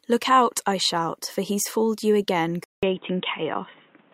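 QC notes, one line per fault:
2.64 s to end, input likely switched to a poorer device: after "he's foiled you again", a 0.19 s gap, then dull sound capped at 3.8 kHz, about 5 dB level shift, faint new noise.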